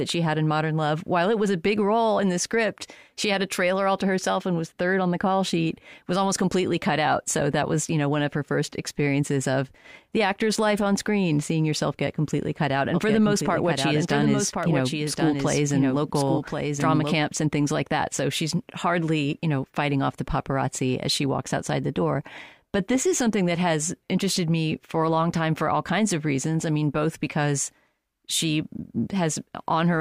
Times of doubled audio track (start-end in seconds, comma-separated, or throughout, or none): 12.94-17.16